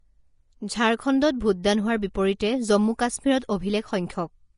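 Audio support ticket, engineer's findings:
Vorbis compression, throughout: hissy, grainy treble and roughened tones, with nothing above 10.6 kHz. Likely cause is a Vorbis encode at a low bitrate, consistent with about 33 kbps. The treble is quantised so coarsely that fine detail turns into noise. A plain low-pass would only dull the top end, but here the band below the cut-off is grainy as well.

Pre-echo at 2.14 s: a short hiss, about 11 ms long, just before a sharp attack, and the attack itself sounds smeared. The transform block spreads its quantisation noise evenly, so the noise meant for the loud onset also fills the quiet moment before it. A click would be a single impulse, but this is a spread of noise leading into the onset.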